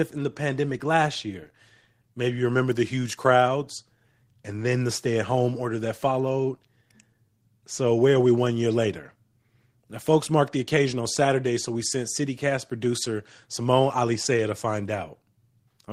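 Speech recording with no audible technical faults.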